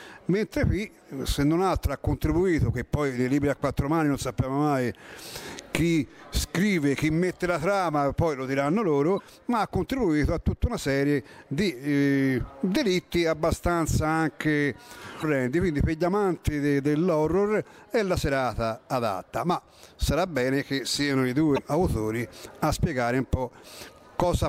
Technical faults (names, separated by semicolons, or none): damaged data in a compressed stream